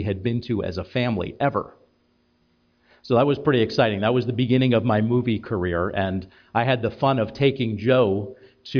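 No technical faults can be heard anywhere here.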